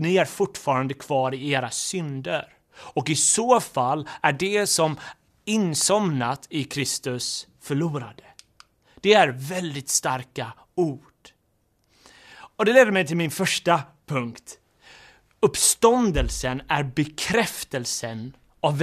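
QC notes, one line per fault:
No faults found in this speech recording; nothing to log.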